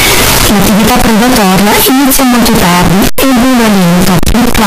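From start to finish the speech is extremely loud and harsh, pinned at an almost fixed, high level as a buzzing, almost square-edged wave. The background noise comes through as loudly as the talking, yet the pitch movement can still be followed. The likely cause is a float read as integer: 32-bit float samples read as 32-bit integers, so each sample's sign and exponent bits, not its true amplitude, set the level.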